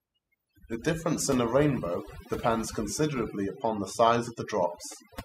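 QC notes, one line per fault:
Throughout: overdone noise removal. The noise reduction is set too aggressively, so individual frequency bands near the noise estimate are pulled down hard or gated off, taking quiet speech detail with them. Background drops and breaks up into twinkling specks.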